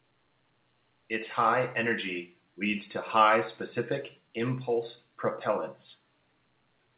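No faults found: the speech comes through the WebRTC call path with nothing above 4 kHz, which fits narrowband G.711 A-law telephony coding.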